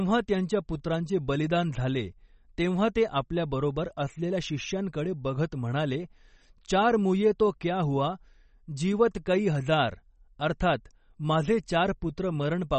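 Throughout, the speech was likely squeezed through low-bitrate MP3 compression, consistent with about 32 kbps, leaving nothing above 8.3 kHz and a plainly audible watery, swirly smear.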